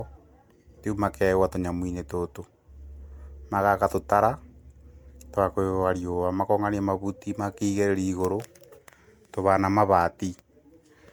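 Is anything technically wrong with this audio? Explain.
Yes. Throughout, the speech shows generation loss, likely from roughly seven MP3 passes at around 128 kbit/s. Quantisation noise accumulates, giving swirly, hollow, smeared attacks. A spectrogram shows flickering holes and nothing above 19.9 kHz.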